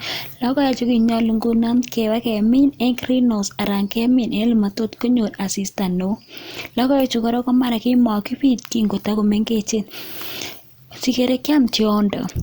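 No technical faults can be heard in the recording.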